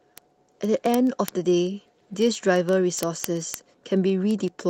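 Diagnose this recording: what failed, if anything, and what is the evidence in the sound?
Word clock ticks in the digital receiver: from 0.13 s on, ticks about every 40 ms as unlocked clocks slip one sample, showing evenly spaced vertical spectrogram lines.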